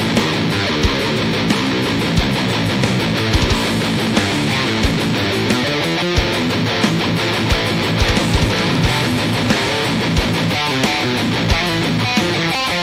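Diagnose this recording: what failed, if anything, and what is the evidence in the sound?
The failure is in the analogue wiring: video or display buzz runs through the whole clip, a 60 Hz buzz with hash above it, roughly 25 dB below the signal. A screen or video cable couples its field-rate pulses into the audio line. Unlike mains hum, it sounds rasping and spiky rather than a smooth tone.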